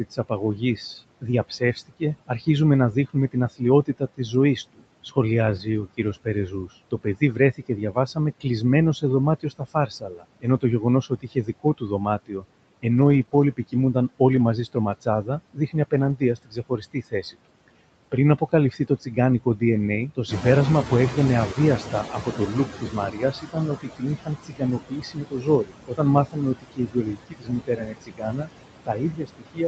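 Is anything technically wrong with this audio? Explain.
Yes. Several faults are audible.

Noise suppressor artifacts run through the whole clip. Background noise is pulled down by about 21 dB, and the noise sinks between the words and rises under them.

Speech cut by the noise suppressor happens from 0.11 to 8.46 s, 9.0 to 14.2 s, 14.73 to 19.61 s, and from 20.15 s to the end. Soft speech is mistaken for noise and dropped by up to about 22 dB, so endings sound swallowed.

A lost packet rebuilt from error correction occurs at 5.47 to 5.61 s, 11.67 s, 12.97 to 13.23 s, 13.33 to 13.43 s, 14.31 to 14.41 s and 15.93 to 16.11 s. No gap is heard. The decoder plays the low-bitrate copy carried in the next packet, so these moments sound briefly rougher and noisier.

Short concealed packet loss covers 13.25 to 13.33 s, as two back-to-back 20 ms holes. The decoder extends the previous sound to fill them, which gives a brief smear or wobble.

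The noise suppressor catching up follows a room-noise rise of about 10 dB near 20.5 s. From 20.28 to 23.42 s the louder noise leaks through, cut by only about 17 dB. It then sinks over roughly three seconds as the noise estimate adapts.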